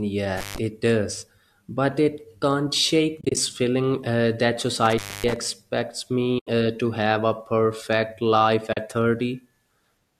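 At 0.37 to 0.58 s an intermittent contact opens the line for about 143 ms. The speech cuts out abruptly, with crackle at both edges and only faint hiss in the gap.

From 3.21 to 3.37 s, AAC frame loss with muting leaves about 100 ms of zeroed audio scattered across 160 ms, with the longest run roughly 30 ms. The speech fades out and back in through soft-edged holes. The short frame spacing fits the 10 ms frames of low-delay AAC, which is likely the codec here.

At 4.86 to 5.36 s the intermittent contact returns, with the line open for about 257 ms. It brings the same crackly edges and a hiss-filled dropout.

Further AAC frame losses with muting follow at 6.39 to 6.47 s, about 80 ms, and at 8.73 to 8.77 s, about 40 ms. Both are gentle fades to silence and back.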